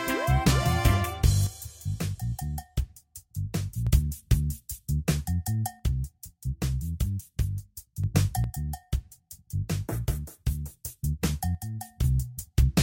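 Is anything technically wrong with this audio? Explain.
Yes. The sound falls abruptly by about 6 dB four times: 1.47 to 3.87 s, 5.80 to 8.04 s, 8.44 to 10.84 s, and 11.55 to 12.04 s. Each time, it snaps back to full level. The likely cause is one channel dropping out. With one stereo side gone, the mono sum keeps only half the shared signal.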